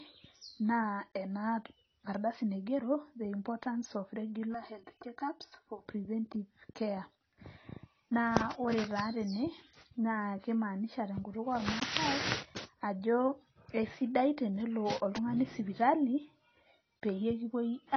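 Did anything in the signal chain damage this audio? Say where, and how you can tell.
Yes. At the codec stage, the whole 18-second speech clip shows AAC compression damage: nothing survives above 6.6 kHz, so sibilants are dull and smeared, with a warbly, fizzy texture. That points to about 24 kbps, likely AAC-LC, where the encoder lowered its cut-off and starved the upper bands. On a spectrogram there is a hard ceiling at 6.6 kHz, with patchy holes and blotchy noise-filled bands beneath it.

Between 4.54 and 5.86 s, after "the importance of" and before "preventive care", there is channel delay (comb filtering), a buffer or routing fault. One channel runs roughly 3 ms late, and when the channels are summed to mono the shared content cancels at regular intervals, starting near 200 Hz. The sound turns hollow and phasey for that stretch. A spectrogram shows evenly spaced dark horizontal notches for just those 1.3 seconds.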